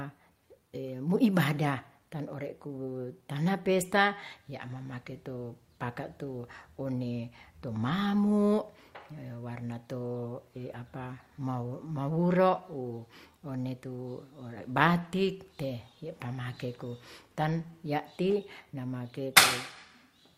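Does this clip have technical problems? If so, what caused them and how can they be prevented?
Yes. Clock drift between sender and receiver runs through the whole clip. The sender's clock runs about 3% slow. The receiver's jitter buffer keeps draining, so small timing hiccups recur at uneven intervals. Locking both ends to a shared clock, or adding drift compensation, would prevent it.

Repeated timing corrections occur from 0.18 s to 19.89 s. The receiver keeps repeating short pieces to wait for the slower sender. This adds about half a second overall, and the speech plays at 97% speed. Smooth adaptive resampling instead of repeating pieces would prevent it.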